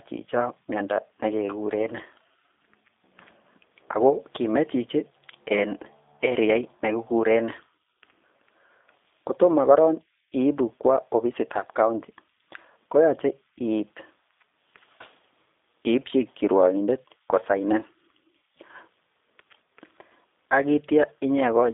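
G.729 codec damage runs throughout the speech. The sound is rebuilt from a vocal tract filter, pitch prediction and a few pulses per 10 ms frame at 8 kbit/s, so it is rough and synthetic. The line band spans roughly 250 Hz to 3.6 kHz, and nothing passes above 3.7 kHz.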